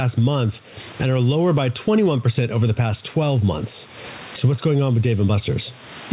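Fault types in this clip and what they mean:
Gain pumping: a gain swing of around 25 dB throughout, leaving loud and soft passages squashed together. The likely cause is microphone gain set far too high with a fast limiter pulling it down. On a waveform, speech peaks sit flattened at one height. On a spectrogram, the faint room noise sits across the band up to 4 kHz.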